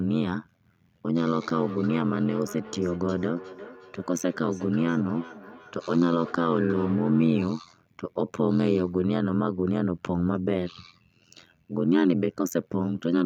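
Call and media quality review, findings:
Overlap-add ripple, throughout: harsh metallic buzz, level pumping around 100 times a second with swings of about 60 dB. Probable component: frame resynthesis stage. Windowed frames overlap without constant summed gain, so amplitude dips once per frame.

Feedback echo between two devices, 1.14 to 7.55 s: speech returns at roughly 0.4 s intervals, thinner and ringing, peaking about 16 dB below direct speech. Probable component: second device in the same room. Its microphone recaptures the other's playback, which neither echo canceller removes.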